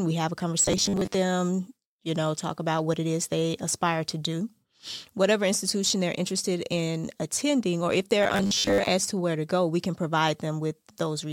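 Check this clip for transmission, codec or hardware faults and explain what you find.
Two stretches of robotic sound from repeated short buffers turn up in this speech, from 0.62 to 1.14 s and from 8.23 to 8.88 s. Both become a rigid, metallic buzz fixed at 100 Hz, which roughly tracks the speech. The likely cause is late audio being covered by looping the last 10 ms chunk. That skips about half the real audio in the first stretch and most of it in the second.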